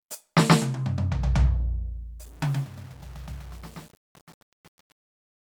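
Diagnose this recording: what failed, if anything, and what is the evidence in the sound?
Truncation distortion on a fade, from sample-format conversion: from 2.24 s the music's fade-out turns gritty, worst after 2.33 s, consistent with an undithered 8-bit word length.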